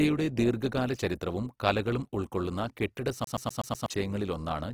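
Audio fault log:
Throughout: Opus compression, likely, and at a low rate. The sound reaches up to about 20.3 kHz, so the bandwidth is still full, but the damage is plain: tones come out grainy and rough, with noisy fill where bands ran short of bits. That fits around 16 kbps in music mode.
3.24 to 3.86 s: CD stuck on one turn, right after "ചരിത്രവും കലകളും ഉൾകൊള്ളുന്ന കെട്ടിട". A 124 ms slice plays five times in a row with a short mute at each jump, like a laser thrown back by a scratch on every turn of the disc. You get that fast, even skipping-CD stutter.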